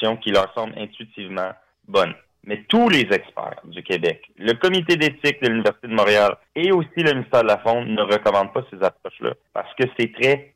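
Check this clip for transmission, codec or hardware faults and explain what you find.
There's one fault here, a sudden gain jump. At 0.41 s the level drops by about 6 dB in a single step and stays down until 1.88 s, when it comes straight back up. The background noise drops and recovers right along with the sound, so this isn't the source changing. Most likely a gain setting or a one-bit shift was applied with no ramp, and that's exactly what a 6 dB step looks like.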